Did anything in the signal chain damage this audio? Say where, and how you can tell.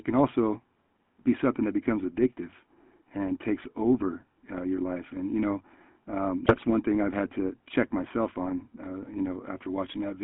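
Yes. At the codec stage, the whole clip has passed through the GSM full-rate codec. Its regular-pulse excitation rebuilds the voice from a coarse, decimated pulse train driving a vocal-tract filter, so the speech carries a constant buzzy, gravelly grain. The band is narrowed to roughly 150 Hz to 3.4 kHz, with nothing above that. The damage is plainly audible throughout and fits a 13 kbps full-rate stream.

At the network stage, GSM bit errors hit the radio link twice. Corrupted bits reached the decoder, so the filter, pitch and gain parameters for those frames were wrong, producing a brief squawk and gargle. The first burst runs from 4.01 to 4.05 s, after "becomes addictive and takes" and before "uh your life and", which fits two damaged 20 ms frames. The second, longer burst runs from 6.46 to 6.65 s, between "and you know um" and "one thing i've had".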